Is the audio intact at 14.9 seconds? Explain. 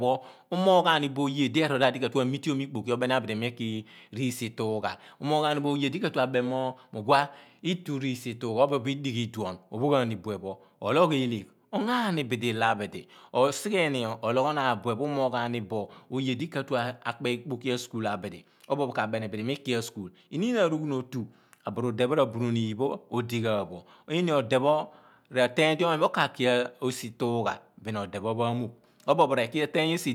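Yes, at 14.9 seconds the speech plays through intact, with no audible dropout, glitch or distortion at that moment.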